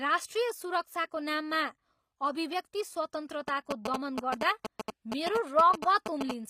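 From the start, the speech has a gritty, metallic treble, and s sounds come out lispy. Nothing is present above 15.5 kHz. This is most likely HE-AAC compression, with the upper band rebuilt from copied lower bands, which fits a low bitrate near 24 kbps.

At 3.48 s, GSM signalling bursts break in and last until 6.31 s. A nearby 2G phone is exchanging short radio bursts with the network, and the audio circuit rectifies them. The result is a galloping dit-dit-dit of short 217 Hz buzzes, about as loud as the speech.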